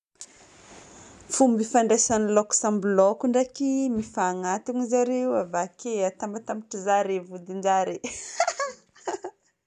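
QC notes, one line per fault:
Nothing stood out on listening to this speech recording.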